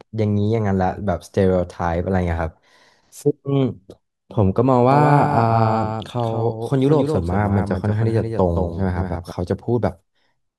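From 4.92 s to 9.32 s the speech carries a doubled audio track: a second, full-band copy trails about a fifth of a second behind, roughly 5 dB quieter, with no decay or room colour, starting and stopping abruptly. The likely cause is a second, slower capture path or a misaligned edit.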